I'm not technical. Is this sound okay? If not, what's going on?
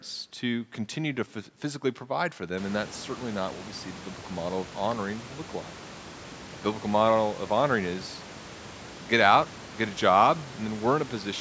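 Yes, it's fine: the speech comes across as it should after ordinary call microphone processing, and the room noise that picks up around 2.5 seconds stays well below the talking.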